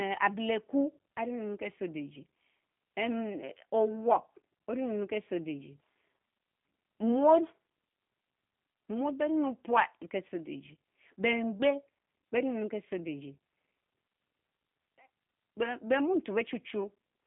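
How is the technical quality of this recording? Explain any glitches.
The recording has audible, continuous low-bitrate voice coding. There is one kind of fault, present from start to finish.

G.729 codec damage runs the full length of the clip. The speech has been squeezed into a narrow telephone band, roughly 150 Hz to 3.6 kHz, with nothing above about 3.7 kHz, so it sounds boxed-in and dull. The codec rebuilds each short frame from a vocal tract filter, a pitch predictor and a few pulses instead of sending the actual waveform. That leaves a plainly audible rough, synthetic edge, which fits an 8 kbit/s G.729-family stream.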